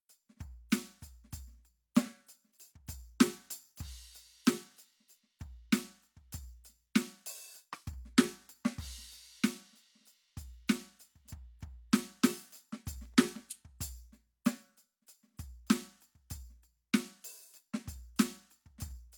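A music clip. From 13.06 to 13.65 s, processor overload crackle appears. Sub-millisecond buffers miss their deadlines repeatedly, leaving tiny silent gaps that tear through the sound.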